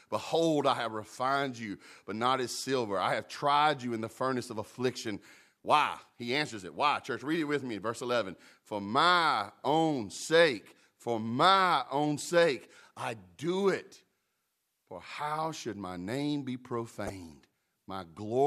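At 17.07 to 17.10 s, just after "should my name be", a corrupt frame decoded fault produces a short chirp-like burst peaking around -25 dBFS. Flipped bits in a couple of compressed frames were decoded anyway, misplacing energy across the spectrum for that span.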